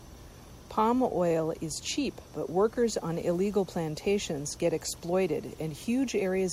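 A speech recording with nothing technically wrong with it.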